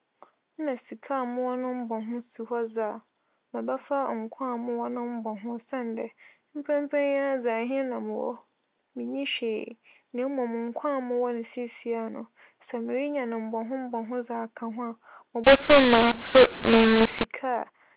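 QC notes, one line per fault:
15.44–17.25 s: mu-law and A-law mixed up. Mu-law telephone samples decoded as A-law scramble levels and lift near-silent samples, so speech turns harsh and pauses fill with noise.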